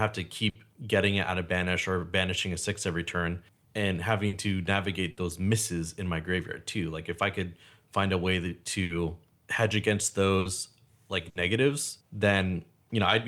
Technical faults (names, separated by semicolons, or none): burst of packet loss